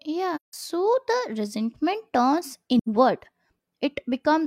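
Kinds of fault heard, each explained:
AAC frame loss with muting: Lost frames were replaced with silence by the decoder. The overlapping windows make the speech fade out and back in, giving soft-edged gaps. A 0.17 s hole at 0.35 s fits four lost frames, and a 0.09 s hole at 2.78 s fits two.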